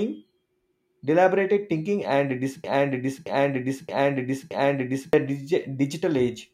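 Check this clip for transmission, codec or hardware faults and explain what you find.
One transmission fault is present, a broken-record loop in this speech clip.

From 2.64 s to 5.13 s a single fragment about 0.62 s long plays four times back to back, each repeat identical. The stall is likely in the player, encoder or stream: it kept resending the last buffered chunk, so the speech due in that span never arrives. Unlike an echo, the repeats don't decay or overlap. Unlike a stutter, each repeat is a whole fragment, not a brief glitch.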